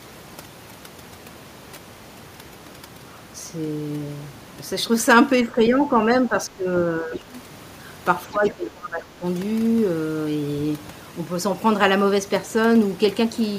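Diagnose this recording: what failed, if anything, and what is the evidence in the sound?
Overdone noise removal sits in the call-processing stage and runs the whole way through. The background drops and breaks up into twinkling residue, because the suppressor gates out spectral detail it judges close to its noise estimate. Unlike a low-bitrate codec, which smears the voice itself, this leaves the voice's timing intact and attacks only whatever the suppressor judged close to its noise estimate.

Speech suppressed in double talk is also a call-processing fault. The talker's level dips at 5.43–5.79 s (about 5 dB), 6.28–6.71 s (about 10 dB), 6.99–7.32 s (about 5 dB), and most deeply at 8.31–9.24 s (about 20 dB, lasting roughly a second). The likely cause is the echo canceller confusing the talker with loudspeaker echo while both sides spoke, then turning everything down. Network packet loss would instead produce abrupt gaps or robotic fill, not these level dips.

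Other side's voice leaking through appears briefly at 7.15–7.2 s, a faint scrap roughly 15 dB below the talker. It arrives inside one of the suppression dips, which points to the same stage: the echo canceller likely failed to remove all of the far-end voice from the microphone signal. What separates it from room reverberation or crosstalk in wiring is that the intruding sound is a separate voice rather than a decaying copy of the talker's own voice.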